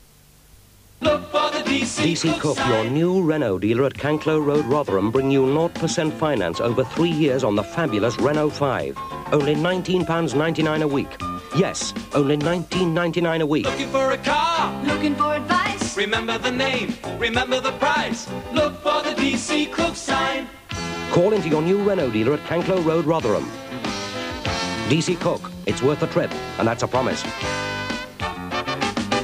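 No technical faults can be heard anywhere in the recording.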